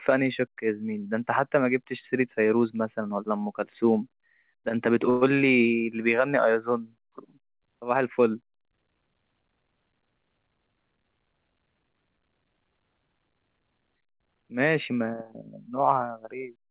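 Speech carried over a call path with nothing above 4 kHz, a narrowband sound that fits G.711 A-law at 64 kbps. From 5.1 to 5.37 s there is a call audio freeze: a fading buzzy smear holds the last sound for about 112 ms, then speech resumes intact but later. Packets likely stalled in transit, so the jitter buffer emptied and the receiver padded the gap.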